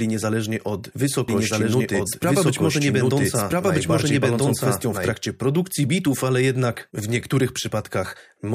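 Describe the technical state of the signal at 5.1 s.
At 5.1 s a doubled audio track is still present, running from 1.28 s to 5.12 s. A second full-band copy trails the original by about one and a half seconds, at roughly equal level. It is dry, with no decay. It likely comes from a slower second capture path or misaligned edit copies. It ends abruptly.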